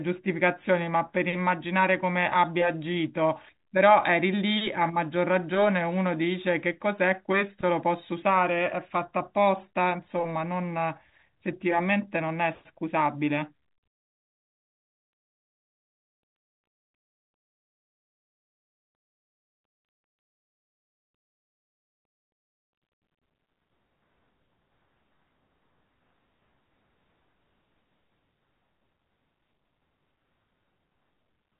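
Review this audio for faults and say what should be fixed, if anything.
Nothing needs fixing here; no faults can be heard.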